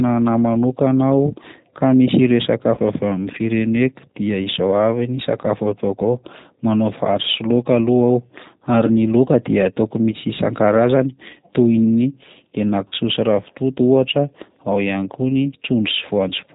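Throughout the speech, the G.729 codec at 8 kbit/s is plainly audible. The voice is rebuilt from a vocal tract filter, a pitch predictor and sparse pulses, which gives it a rough, slightly synthetic grain. On a spectrogram, all energy stops sharply at 4 kHz.

VoIP packet loss concealed by the speech codec occurs at 2.75–2.80 s, 10.12–10.16 s and 12.88–12.94 s. The first two gaps fit a single lost 20 ms packet, and the third fits 40 ms of missing audio. Each time, the decoder keeps repeating its last pitch and filter at falling gain, so the sound stretches into a brief buzzy tone or coloured noise that fades. The waveform shows a decaying stretch. The spectrogram shows flat, smeared bands, followed by a weak onset as the audio resumes.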